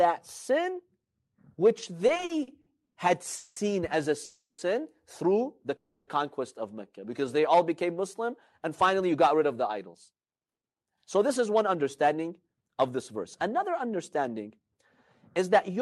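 Repeated stalls (stutter) run from 2.07 to 2.98 s: packets arrived late in eight gaps, the longest 120 ms, so about a third of that stretch is filled-in continuation, making the speech drag and stutter. A call audio freeze at 3.36 to 3.58 s, just before "as a", stretches the last sound for 200 ms. Another, from 4.24 to 4.60 s between "as a" and "through the", fills 340 ms, fading to 80 ms of silence. A third, at 5.76 to 6.09 s after "through the", fills 310 ms. Each freeze is likely from packets held up in transit emptying the jitter buffer, and the speech then resumes where it stopped. A jitter buffer slow-down from 7.00 to 7.56 s repeats pitch periods to rebuild reserve, adding 63 ms so speech runs at 90% speed, drawn out at the same pitch. A jitter buffer speed-up from 9.01 to 14.76 s trims short pitch-period pieces, about half a second in total, so speech runs about 9% fast and sounds hurried.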